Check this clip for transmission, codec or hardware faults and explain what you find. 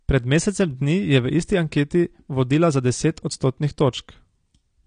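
There is one fault, present from start to finish: AAC compression. The speech has nothing above 9.7 kHz, so it sounds dull, and coding damage is plainly audible across the whole clip. The cause is likely AAC-LC at a low bitrate, around 32 kbps. The encoder splits the signal into frequency lines and spends its few bits on what the ear notices most, which removes the top band and leaves the remaining detail coarsely quantised.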